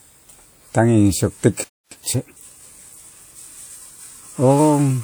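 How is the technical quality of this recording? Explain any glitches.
Two linked playback faults affect the speech, both within the first half of the clip.

From 1.64 to 1.92 s there is a playback stall. The speech cuts to silence for about 0.27 s mid-flow, then resumes. This is likely the player running short of buffered data or its audio thread being blocked.

From 1.92 to 2.46 s comes a time-compressed catch-up. The player trims its backlog by excising short segments and cross-fading the joins, playing at roughly 1.5 times normal speed. The speech sounds rushed but keeps its pitch.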